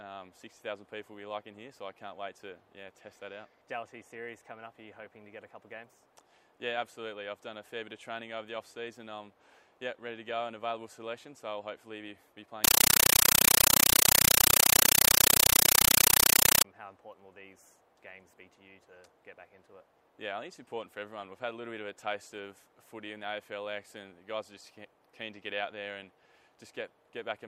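From 12.64 to 16.64 s, very loud chattering static replaces the sound: 8 ms bursts of noise repeating at 31.25 Hz. This is a compressed stream played as audio, an AC-3 bitstream, which fits 384 kbps, passed through undecoded and treated as ordinary samples.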